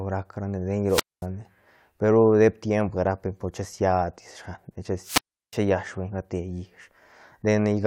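Around 0.85 to 1.27 s and again at 5.02 to 5.60 s, the speech hits a wireless microphone squelch dropout: the radio link fades, the receiver's squelch mutes, leaving roughly 230 ms and then 350 ms holes.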